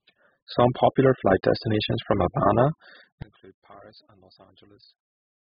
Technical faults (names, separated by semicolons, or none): AAC compression